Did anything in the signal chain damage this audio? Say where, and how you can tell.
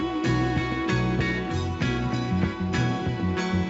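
No, nothing in the chain damaged it: one trace of the path is that the audio contains nothing above about 8 kHz, which fits the normal wideband limit of a call passed through microphone processing and an Opus codec.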